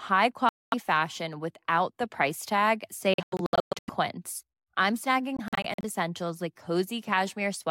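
From 0.49 to 0.74 s the speech cuts to silence for about 232 ms and resumes on "fashion without the price". This is a Bluetooth dropout, likely from packets reaching the headphones too late and being discarded. The sound continues as if it had kept playing. After "without the price tag", 3.14 to 3.89 s is broken by repeated holes totalling about 488 ms, the longest 116 ms. From 5.37 to 5.84 s, before "essentials like", shorter gaps add up to about 186 ms.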